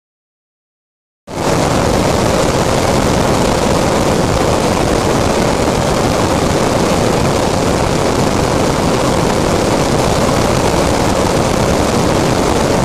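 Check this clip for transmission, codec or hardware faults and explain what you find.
Throughout the clip, the sound runs at double speed and a full octave (12 semitones) high. This is audio read two samples at a time: the reader treated each pair of samples as one frame, so playback doubled.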